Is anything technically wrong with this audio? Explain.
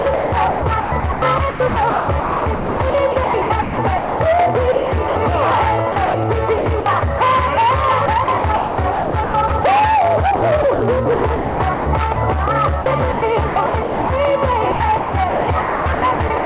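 Yes. Sound chopped by the voice detector occurs at 0–4.2, 4.72–5.16, 5.92–7.2, 8.06–9.64, 10.36–12.16, 12.82–14.1 and 14.72–16.45 s. Within each stretch, between 0.3 s and about 2.2 s of real sound drops out into flat synthetic hiss, likely because the sender's detector kept switching between transmitting and comfort noise. The result is choppy sound with holes. On the waveform this shows as abrupt envelope steps. On the spectrogram, smooth, featureless noise patches cut into the detailed texture. All content sits below 4 kHz, which fits a narrowband G.711 call path.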